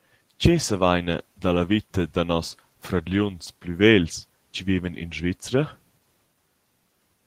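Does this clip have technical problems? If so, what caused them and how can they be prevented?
No, no technical faults heard.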